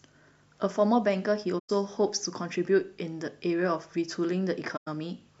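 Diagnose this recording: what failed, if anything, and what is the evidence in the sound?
Codec stage: AAC frame loss with muting. Soft-edged 0.11 s gaps at 1.58–1.70 s and 4.76–4.88 s fit about five zeroed frames, with overlapping windows fading the speech out and back in.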